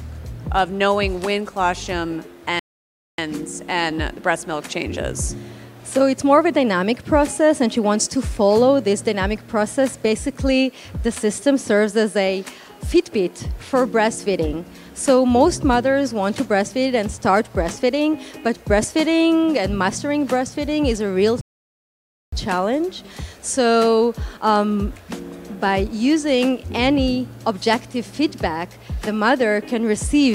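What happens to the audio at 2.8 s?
At 2.8 s the audio is inside a playback stall running from 2.59 s to 3.18 s. The sound cuts off mid-flow and the output stays silent for about 0.59 s before resuming. The likely cause is the player running out of buffered data, or its output thread being blocked, so nothing reached the output until it recovered and continued feeding samples.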